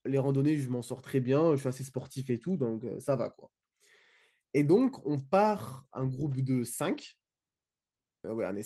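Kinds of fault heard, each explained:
No audible faults detected.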